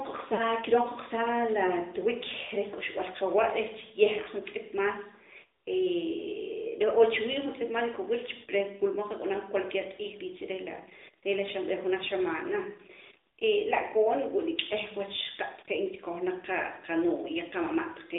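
A speech clip that has passed through the AMR narrowband mobile codec for its whole length. The band runs only from about 300 Hz to 3.7 kHz, so the sound is thin and boxy. The codec damage is plainly audible as a buzzy, synthetic edge, which fits AMR-NB at around 10.2 kbps. At 0.34 to 0.43 s there are lost AMR speech frames. The decoder fills about 40 ms by repeating its last good settings at falling gain. This briefly draws the sound out, which fits two lost 20 ms frames.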